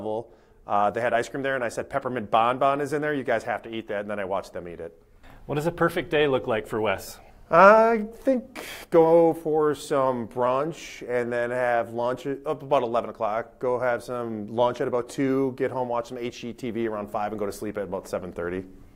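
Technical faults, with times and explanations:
Nothing stood out on listening.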